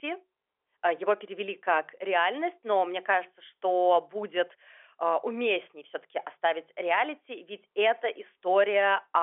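The speech has the narrow band of G.711 telephone coding, with the line passing 300 Hz to 3.4 kHz and nothing above 3.7 kHz, and no faults can be heard.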